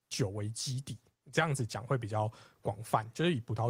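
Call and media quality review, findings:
No technical faults found in the speech signal; level, continuity and timing hold steady throughout with no audible defects from capture, transport or playback.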